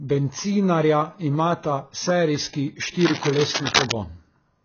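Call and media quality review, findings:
AAC compression, whole clip: speech band-limited, nothing above 6.8 kHz, dull and smeared, with a watery warble on vowels and fizzy, blurred sibilants. Likely an AAC-LC encode at a very low rate, consistent with about 16 kbps. The encoder lowered the cut-off and quantised the remaining spectral lines coarsely, leaving holes that smear and swirl.

Cable scratch noise, 2.99 to 3.92 s, right after "imata serijski": dense, uneven scratching and rustling over the speech, only a few dB below it. Likely a worn cable, connector or control being moved, with contact resistance changing rapidly and injecting irregular noise bursts into the signal path.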